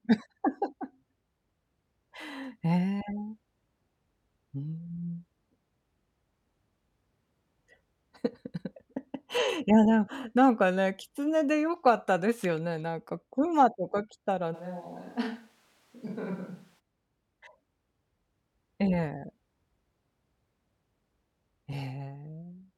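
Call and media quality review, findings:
Speech turns roomy and hollow, 14.56–16.78 s. Bass thins, level drops about 10 dB, room noise about 30 dB under the voice. Abrupt change both ways. Likely switch to a distant microphone; close mic signal lost.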